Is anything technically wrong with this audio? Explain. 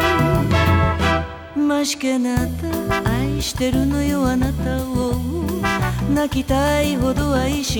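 Yes. From 2.71 s to the end, the audio shows crude rate conversion. The sample rate was raised with no anti-imaging filter, and the ratio fits a 44.1 kHz to 48 kHz change. Missing samples were filled by repeating the nearest existing one, so the waveform gets small steps in a repeating pattern set by the two rates. Those steps add tones unrelated to the sound, around 25 dB below it, heard as a gritty, inharmonic fizz that rides on loud and high-pitched passages.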